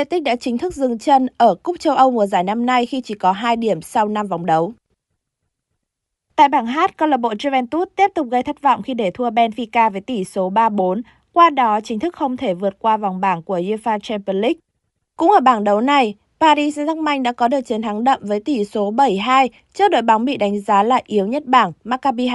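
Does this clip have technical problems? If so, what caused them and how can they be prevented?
Yes. Bluetooth LC3 compression damage is plainly audible throughout the speech: a breathy, grainy edge over the upper frequencies, without the swirling, chirpy warble of MP3 artefacts. The likely cause is the LC3 codec, and the sound fits a 48 kbps stream with 7.5 ms frames. Recording locally on the device, or sending it over a higher-bitrate LC3 link, would prevent it.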